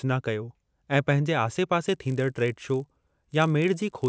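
Speech that, from 1.88 s to the end, shows a resampler restarted on every block: each 20 ms block, likely a 48 kHz to 16 kHz conversion, was processed alone, so every edge errs. The result is a 50 Hz buzz that, unlike mains hum, stops in pauses.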